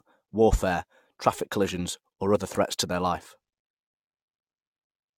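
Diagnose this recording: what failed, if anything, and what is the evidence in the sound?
Codec stage: the speech is swirly, hollow and smeared throughout, with nothing above 17 kHz. This is likely generation loss from about seven AAC-LC re-encodes compounding quantisation noise.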